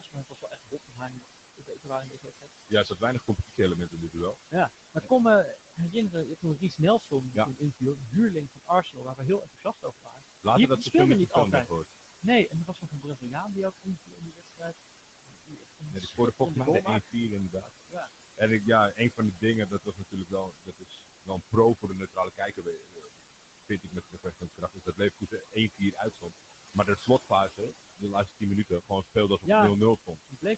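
Speech recorded in a room and carried over a call, with noise suppressor artifacts throughout. The suppressor pulls the steady room noise down by about 20 dB, frame by frame. The background sinks in the pauses and swells back under the speech. The room noise itself sits only about 11 dB below the speech, so the suppressor works hard. There is also speech cut by the noise suppressor, running from 0.0 s to 30.57 s. It mistakes parts of the voice for noise and turns them down with the background. The deepest drop is about 22 dB. Soft consonants and word endings sound swallowed or faint. Nothing is heard above 8 kHz, which fits the call codec's bandwidth.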